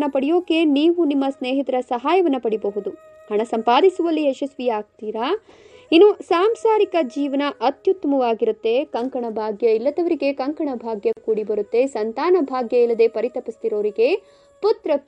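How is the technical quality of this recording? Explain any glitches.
There is one glitch: at 11.13 s a gap at a join of encoded pieces drops about 41 ms of silence into continuous sound. Encoder start delay and end padding were left untrimmed, so the sound cuts out abruptly, slightly smeared, then resumes where it stopped.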